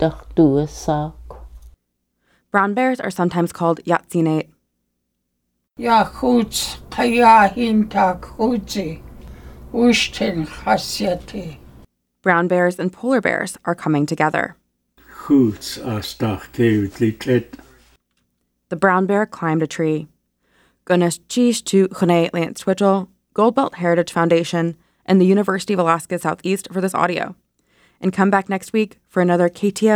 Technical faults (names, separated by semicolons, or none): none